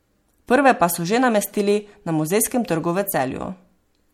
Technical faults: MP3 compression

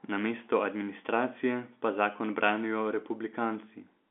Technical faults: none

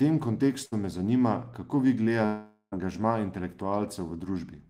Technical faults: burst of packet loss; long network dropout

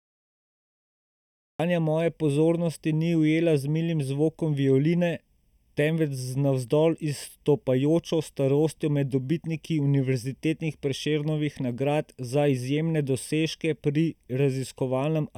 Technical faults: channel delay (comb filtering); cut-off start

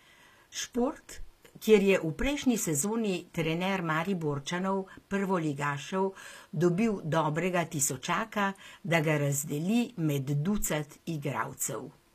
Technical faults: HE-AAC compression

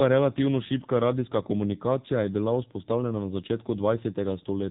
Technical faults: AMR narrowband mobile codec

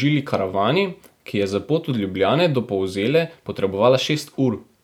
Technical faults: none

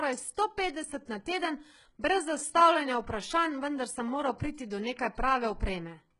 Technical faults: HE-AAC compression

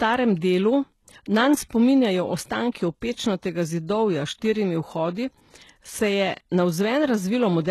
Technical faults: HE-AAC compression; pre-echo

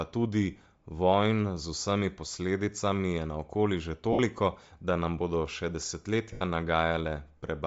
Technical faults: Bluetooth LC3 compression; lost LE Audio frames

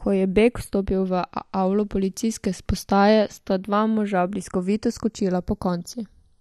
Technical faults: channels drifting apart

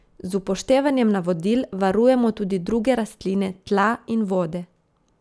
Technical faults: none

